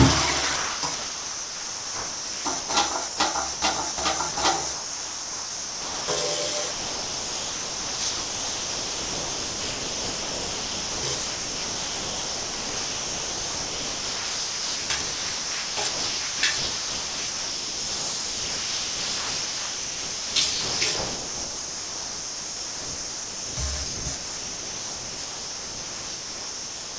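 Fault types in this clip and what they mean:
Sound chopped by the voice detector: the sound breaks up repeatedly, likely a voice detector switching sending on and off, with comfort noise filling gaps.
Sound dropped by the voice detector: the sound gives way briefly to steady noise, from 60 ms up to 1.35 s, likely because the detector treated it as background and stopped sending.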